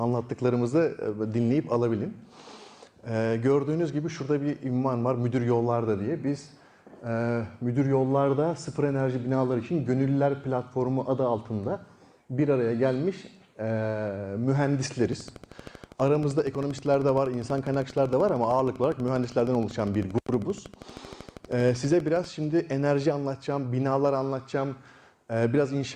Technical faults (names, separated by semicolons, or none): train of clicks